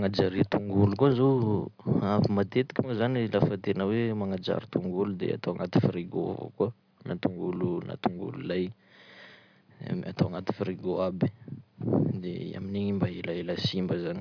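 Nothing stands out as a technical problem anywhere in this speech recording, so there's no time to point to and no cause to explain.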